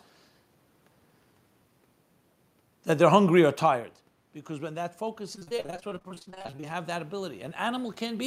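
After "they're hungry or tired", at 4.47 s, automatic gain rising begins and lasts to the end. The voice had fallen about 13 dB, as the talker moved away around 3.5 s. Gain climbs gradually, so voice and room noise swell together.

From 5.35 to 6.65 s, repeated packet loss gives a robotic sound. Many short holes, up to 39 ms each, are patched by continuing the last sound. About 43 percent of that stretch is filled this way.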